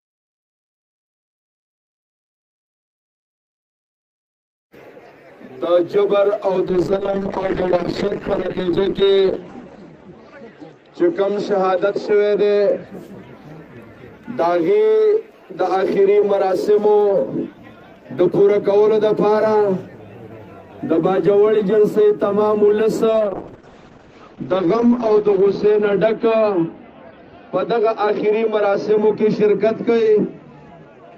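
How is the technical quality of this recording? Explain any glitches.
Two stretches suffer a call bitrate drop, at 6.71–12.93 s and from 23.14 s to the end. The bandwidth estimate fell and the encoder coded more coarsely, which fits a slide from 32 to 8 kbps. Highs get cut from 20 kHz to 8 kHz, so it goes muffled and watery, worst for about 2.4 s and 2.0 s.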